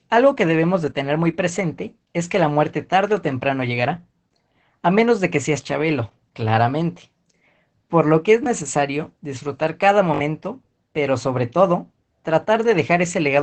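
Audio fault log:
throughout: Opus voice compression. The speech sounds muffled, hoarse and slightly robotic, consistent with SILK coding at about 12 kbps in 20 ms frames. On a spectrogram, harmonics look smeared and grainy frame to frame, and nothing appears above 18.8 kHz.
8.44–8.46 s and 10.14–10.2 s: repeated buffer. A short slice, consistent with a 20 ms buffer, replays with hard joins, once at 8.44 s and three extra times at 10.14 s. This briefly loses about 20 ms, then about 70 ms, of sound. The waveform shows identical copied segments with abrupt edges.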